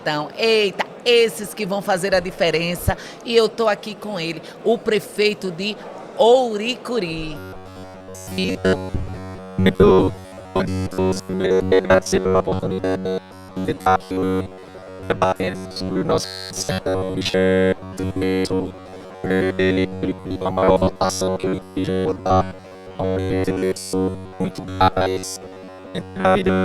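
Robotic sound from repeated short buffers runs from 7.38 s to 26.64 s, turning the audio into a rigid, metallic buzz pitched at 93.8 Hz that only loosely tracks the original. The likely cause is fresh audio arriving too seldom, with playback filling the gaps by looping the last chunk of about 10.7 ms, so most of the material, roughly two-thirds or more, is repetition rather than new sound, and that fixed loop length imposes the constant buzz.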